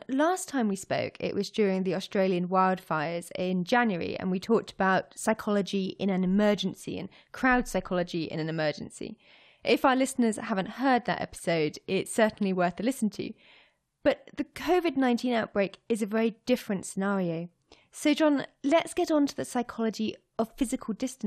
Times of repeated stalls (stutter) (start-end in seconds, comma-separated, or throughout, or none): none